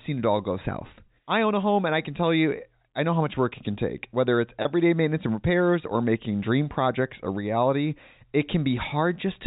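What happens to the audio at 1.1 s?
At 1.07 s, between "it all go south" and "I own a home", a packet loss with pitch repetition occurs. A gap of about 10 ms, which points to a single lost packet, reached the receiver with no audio, so the concealment bridged it by repeating the last pitch period of the speech. Because the gap is so short, the repetition is heard as a brief held, slightly buzzy tone rather than a dropout, heard within the narrowband G.711 telephone sound.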